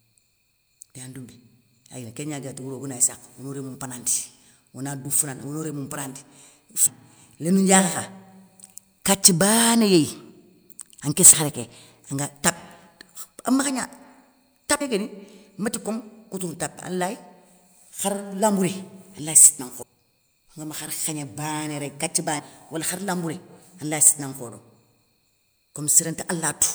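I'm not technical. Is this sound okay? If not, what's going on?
No, there's a problem. The speech jumps forward five times, at 6.85, 11.32, 14.8, 19.81 and 22.38 seconds. These are compressed frames skipped: the file stores audio in small chunks (the gaps fit chunks of about 24 ms), and some chunks were missing or too damaged to play. Each time, somewhere between about 0.15 and 0.4 seconds of speech just vanishes.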